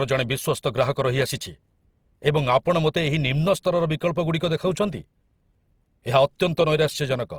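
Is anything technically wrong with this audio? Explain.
Yes. Throughout the speech there is a rough, grainy, noisy texture, while the top end still reaches about 20.2 kHz. This is likely Opus compression in music mode at a rate near 24 kbps, where starved bands are filled with folded or noise-like content instead of being left empty.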